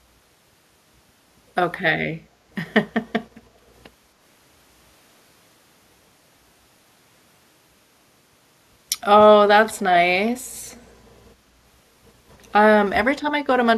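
An echo leak appears from 10.71 to 10.85 s: a brief, very faint delayed copy of the speech arrives about 271 ms after the original, sitting far below the main voice. The likely cause is a far end playing the call through a loudspeaker, where the echo canceller failed to fully suppress what its microphone picked up, so a residue of the incoming speech was sent back into the call.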